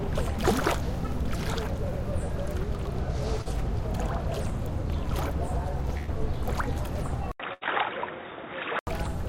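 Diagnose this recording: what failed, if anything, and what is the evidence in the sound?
Network stage, short concealed packet loss: from 3.41 to 3.47 s the sound briefly smears, as the receiver covers 40 ms that never arrived by extending the preceding sound and then blending back into the real signal. Unlike a dropout or a digital click, there is no hard silence or step. The gap is bridged with plausible-sounding material, and the true 40 ms is simply absent.

Network stage, burst of packet loss: from 5.97 to 6.09 s, and again from 7.53 to 7.63 s, the last sound is held and fades for about 100 ms and then about 80 ms. It is a decaying buzz or hiss rather than a quick smear. When the real audio resumes, a stretch of the original is missing. The length and the fade separate these from the 40 ms concealment at 3.41 s.

Capture stage, input switched to a poorer device: at 7.32 s the audio goes silent for 80 ms. 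It returns dull and band-limited with nothing above 3.8 kHz, a few decibels quieter, and over a new background noise roughly 30 dB down. Full bandwidth is back at 8.87 s. A codec bitrate drop would narrow the band without the gap, the level shift or the new noise, which together point to a likely change of input device.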